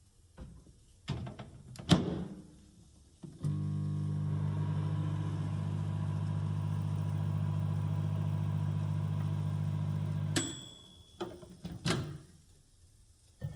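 A recording of sounds which, from 6.54 s to the end, carries a steady 50 Hz buzz from the resampler restarting on every block. Each 20 ms block of the 24 kHz to 48 kHz conversion gets edge errors. Unlike mains hum, the buzz vanishes whenever the sound stops.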